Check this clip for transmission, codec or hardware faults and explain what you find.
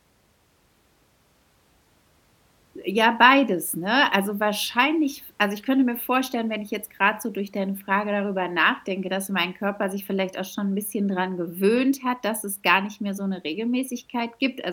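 No faults detected.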